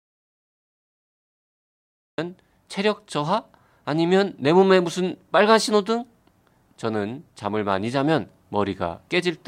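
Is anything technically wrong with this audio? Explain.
Yes. From the very start until 2.18 s the clip is an audio dropout to silence: the opening 2.18 s hold silence, with no room tone or noise floor at all, and the speech only comes in at that point, already in mid-flow. The most likely cause is that the input signal was lost, through a disconnected device, a failed link or a mute, while the recorder kept writing silence. Whatever was spoken during that stretch is not in the file.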